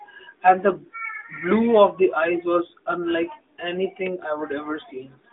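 Nothing in this speech clip points to a technical fault. It comes through an AMR narrowband mobile codec path, with the line band running from about 250 Hz to 3.6 kHz, nothing above 3.7 kHz and only light codec colouring, which fits the codec's 12.2 kbps mode.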